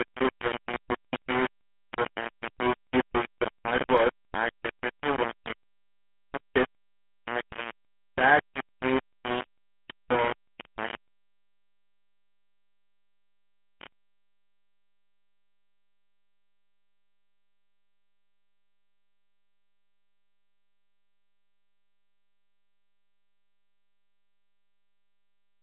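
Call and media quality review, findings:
Low bit depth without dither, likely quantiser stage: heavy grainy distortion tracking the speech throughout, error only about 5 dB below signal; quiet tails sputter between steps. Consistent with roughly 3-bit rounding, no dither to decorrelate error.

GSM full-rate codec, throughout: band limited to 150 Hz to 3.4 kHz, buzzy gravelly roughness on voiced speech, plainly audible. Regular-pulse excitation with decimated residual; the sound fits the 13 kbps full-rate coder.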